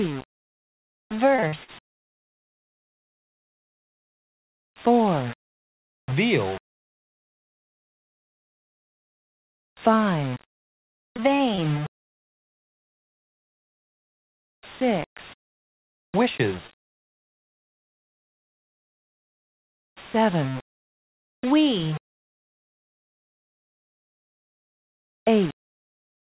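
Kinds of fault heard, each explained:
Low bit depth without dither: A grainy distortion runs through the whole clip and shifts with the sound, making quiet passages gritty or sputtery. The likely cause is rounding to about 5 bits with no dither. Unlike steady hiss, this error, around 20 dB below the signal, follows the sound.
Repeated packet loss (robotic sound): From 1.36 to 1.70 s and from 10.35 to 11.60 s, holes come one after another, each patched by stretching the last sound, with gaps up to 95 ms. The result is dense chopping rather than isolated hiccups.
Scattered short gaps: Between 16.67 and 17.37 s, a few isolated holes, none much longer than about 15 ms, are filled by continuing the previous sound. They cause brief ticks or hiccups while the audio stays clear, unlike the sustained robotic chop of repeated loss.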